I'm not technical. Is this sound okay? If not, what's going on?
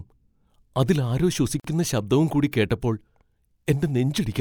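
No. There's a gap at a join of encoded pieces from 1.60 to 1.64 s, between "അതിൽ ആരോ" and "ശബ്ദവും കൂടി കേട്ടപ്പോൾ". The speech was compressed in separate chunks and glued together untrimmed, so leftover padding leaves a 46 ms gap before the speech picks up where it stopped.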